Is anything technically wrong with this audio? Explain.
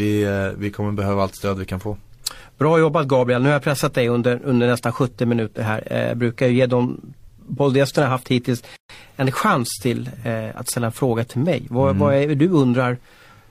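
Yes, there is a gap at a join of encoded pieces in this speech, from 8.76 to 8.90 s. The audio was encoded in separate segments that were joined without trimming, so the encoder's start-up delay and the padding in its last frame both remain at the seam. The result is a gap of about 133 ms cutting into continuous speech, with smeared edges, after which the speech resumes exactly where it broke off.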